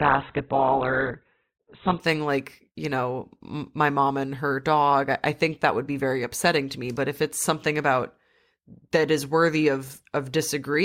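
For the first 2.0 s the speech sounds dull and smeared, with nothing above 4.2 kHz and stronger codec artefacts, then brightens abruptly without a gap. That is an adaptive stream starting at a low bitrate, consistent with Opus near 8 kbit/s stepping up to 64 kbit/s.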